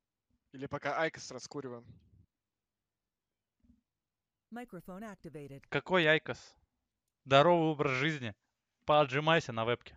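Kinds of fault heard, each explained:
No technical fault can be heard anywhere in this audio. There is nothing here that calls for an explanation.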